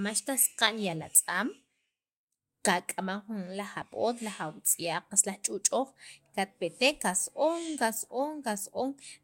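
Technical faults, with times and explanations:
0.45 s and 3.81 s, compressed frames skipped: the speech jumps forward slightly at each point, losing around 20 ms of audio at 0.45 s and around 10 ms at 3.81 s. The gaps fit the loss of about two and about one 10 ms frames, either missing from the stream or rejected by the decoder as corrupt.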